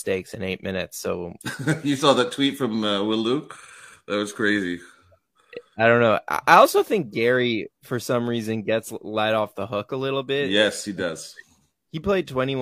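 A speech recording whose signal carries no audible dropouts, clipping, distortion, noise bursts or timing disturbances at any point.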